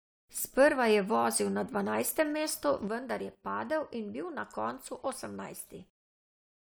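A short speech clip with two problems. From 2.88 s right to the end, the level drops abruptly by about 6 dB and stays down. That's what you'd hear if one channel drops out, most likely one side of a stereo pair going dead before the mono sum, which halves everything both sides shared. Then at 5.00 s there's a brief glitch, the classic sign of damaged data in a compressed stream: the decoder hits corrupted frames, loses sync, and jumps ahead to the next good header.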